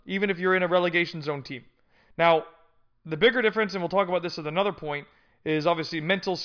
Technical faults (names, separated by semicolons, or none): none